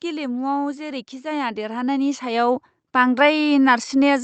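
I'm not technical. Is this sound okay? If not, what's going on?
No. From 1.21 to 3.22 s, automatic gain rising: the system judged the input too quiet and slowly turned it up, so voice and background swell louder together.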